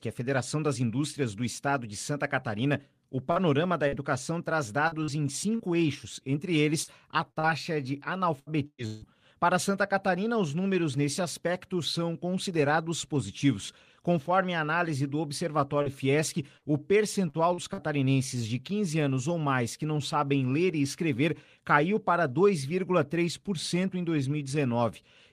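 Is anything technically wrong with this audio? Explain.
Yes. The speech suffers repeated packet loss (robotic sound) in three stretches. From 3.31 to 5.62 s, just before "eixos entre", five short gaps (longest 43 ms) take out about 200 ms. The worst stretch runs from 6.83 to 9.05 s, right after "eixos entre": six gaps remove about 480 ms, with one lasting 157 ms. From 15.82 to 17.81 s, five gaps (longest 44 ms) again lose about 200 ms.

Each missing piece is covered by stretching out the sound that came just before it, so the speech turns choppy, with pieces missing. On a spectrogram, the patched spots show as frozen, flat horizontal bands with sharp vertical edges. On the waveform they appear as short runs of identical repeated cycles.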